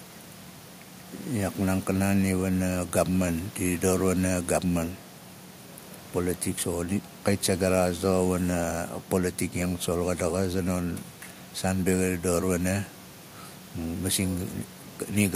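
No technical faults occur.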